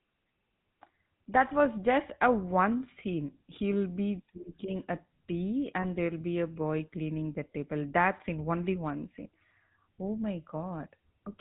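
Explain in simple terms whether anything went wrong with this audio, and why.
Throughout the clip the speech has a buzzy, gravelly roughness and sounds muffled, as if heard over an old mobile phone. That comes from the GSM full-rate codec, an early phone-call format. It rebuilds the voice from a simple model of the throat and mouth driven by regular pulses, so fine detail turns rough. It also cuts everything above 4 kHz, which takes away the crisp, airy part of the sound.

Around 5.82 to 5.86 s there is a brief metallic ring where the sound seems to hang for an instant. These are lost GSM frames. A short piece of the signal, consistent with a single 20 ms frame, failed to arrive. The decoder covered the gap by repeating the last good piece, and that repetition is what produces the ringing.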